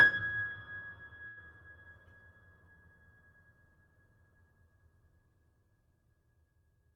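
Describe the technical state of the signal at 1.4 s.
Right around 1.4 s the music has just come out of a brief hold. From 1.27 to 1.38 s the sound freezes: the last moment is drawn out for about 90 ms with a faint buzzy, slightly dipped texture, then the music resumes exactly where it left off, now running about 90 ms late. This is a short stall from a late packet. The packet missed its slot, the jitter buffer emptied, and the receiver stretched what it already had until the data arrived, so nothing is missing.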